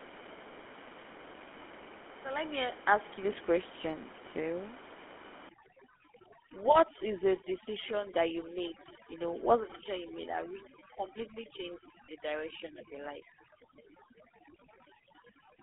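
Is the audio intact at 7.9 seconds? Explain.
No. At 7.9 s the audio carries two faults. The first is overdone noise removal, running from 5.49 s to the end of the clip. A noise reduction stage set far too aggressively pulls individual frequency bands down or out whenever they sit close to its noise estimate. Room noise lies only about 13 dB below the speech here, so that estimate overlaps the quieter parts of the voice. The gaps between syllables fall to near silence dotted with twinkling specks.

The second is GSM full-rate codec damage, present across the whole clip and plainly audible at this moment. This early mobile codec models the vocal tract and excites it with a regular pulse train, keeping only every third excitation sample, at a rate that points to 13 kbps. Its output is confined to a telephone band of roughly 250 Hz to 3.4 kHz, and the speech has that characteristic buzzy, gravelly roughness.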